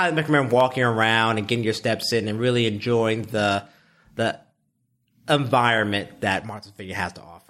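Four sharp single clicks at 0.60, 1.72, 5.60 and 6.97 s in the speech are likely dropped samples. A fraction of a millisecond goes missing, so the waveform jumps straight to a later value. Unlike a dropout, nothing audibly vanishes and there's no gap, only the click.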